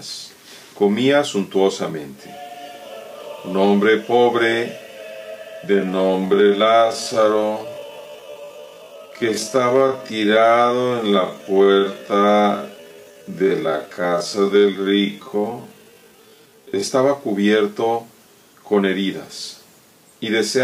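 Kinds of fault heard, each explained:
Time-stretched section: from 5.64 s to 16.86 s the pace drops abruptly to about 0.56 times normal speed while the pitch stays put, so the sound drags, then snaps back to normal pace at 16.86 s. This is likely software lengthening that stretch to fill a set duration, repeating small slices of audio to slow it without lowering the pitch.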